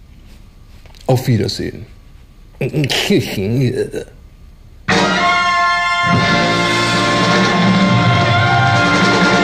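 From 2.84 to 3.17 s, peaks crackle: hard clipping, where a stage overloaded by about 1 dB flattened the waveform tops, adding high harmonics.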